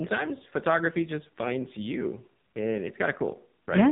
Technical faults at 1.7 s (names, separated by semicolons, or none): AMR narrowband mobile codec